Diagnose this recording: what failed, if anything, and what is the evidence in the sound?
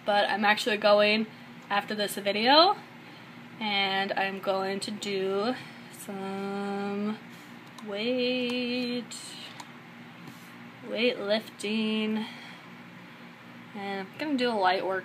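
Nothing in the recording stood out on listening, and I found no sign that any stage in the chain had failed.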